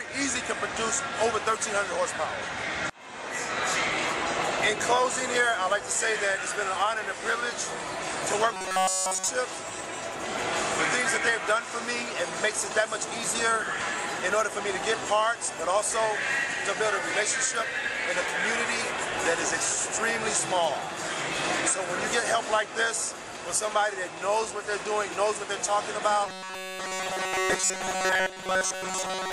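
The sound likely suffers from robotic sound from repeated short buffers: audio stalls and a 5 ms slice is looped in its place. That imposes a rigid, metallic buzz near 188 Hz, covering essentially everything at 8.54–9.28 s and most of the audio from 26.27 s to the end.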